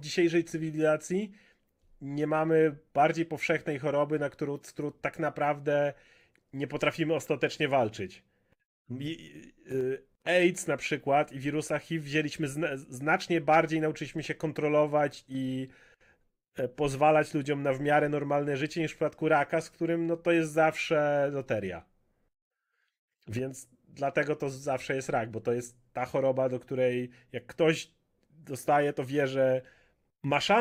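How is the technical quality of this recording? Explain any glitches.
No technical faults are audible anywhere in the recording, so there is nothing to explain.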